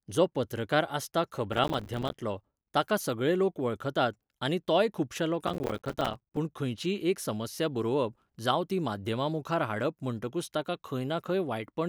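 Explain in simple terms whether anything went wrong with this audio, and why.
Yes. The speech breaks into a gritty crackle twice: from 1.53 to 2.22 s, right after "जो पत्रकार आसता", and from 5.47 to 6.37 s, after "वळखतात आनी तोय खुबशां". This is processor overload crackle. The computer fell behind and missed dozens of its tiny audio chunks in a row, each lasting only a few milliseconds, and each miss left a sharp-edged sliver of silence. Unlike a single dropout, which is one clean gap, these rapid gaps pile up into a rough tearing that stops once the load eases.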